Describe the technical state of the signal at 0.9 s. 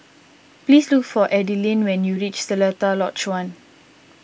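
At 0.9 s the speech signal is intact, with only the normal call microphone processing audible, its high-pass trimming the lowest bass and nothing above about 8 kHz.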